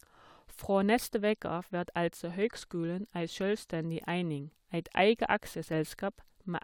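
No technical faults are audible anywhere in the speech.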